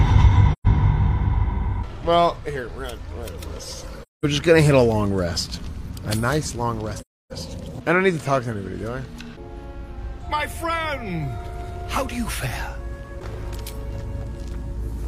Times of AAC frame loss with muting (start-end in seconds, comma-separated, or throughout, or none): 0.52-0.67, 4.02-4.25, 7.00-7.33